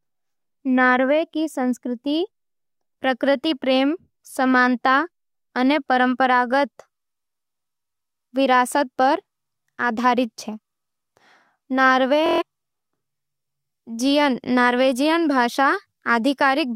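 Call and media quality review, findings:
Bluetooth stutter, 12.26 to 12.42 s. Short speech slice repeats as a machine-gun buzz; link dropped packets. About 139 ms lost, consistent with six missing frames.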